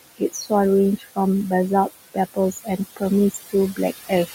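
A speech clip with noise suppressor artifacts running through the whole of it. The room noise sits about 12 dB below the speech. The suppressor pulls it down by about 16 dB in the gaps, then lets it back up under the speech. That pumping is audible. Speech is also cut by the noise suppressor three times. Between 0.18 and 0.52 s, parts of the speech drop by up to about 18 dB, some 150 ms in all. From 0.97 to 1.18 s, around 100 ms is turned down by up to about 15 dB. From 2.34 to 2.8 s, roughly 150 ms falls by up to about 19 dB. In each case the suppressor mistook quiet speech for noise and turned it down with the background. The affected sounds come across faint or swallowed.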